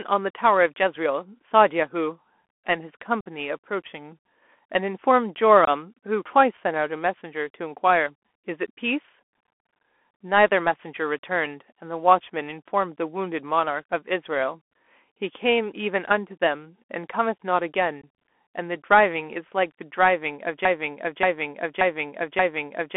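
Speech heard through a Bluetooth CVSD headset codec, band-limited to roughly 250 Hz to 3.4 kHz, with plainly audible codec damage: the one-bit delta modulation, which fits a 64 kbps CVSD link, lays a granular hiss under the voice and turns sibilants scratchy. Unconcealed Bluetooth headset packet loss punches abrupt gaps at 3.21–3.26 s (about 53 ms), 5.65–5.69 s (about 23 ms) and 18.02 s (about 19 ms), where runs of short voice packets were dropped and nothing filled the hole. From 20.65 s to the end, a broken-record loop repeats a 580 ms fragment four times back to back, most likely because the stream stalled and kept resending its last buffered piece, so the audio that belonged there is missing.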